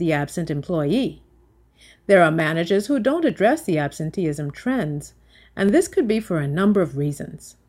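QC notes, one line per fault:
2.40, 3.30, 4.37 and 5.69 s: dropped samples. Four sharp single clicks, the first just before "who don't", likely where a fraction of a millisecond went missing, making the waveform jump.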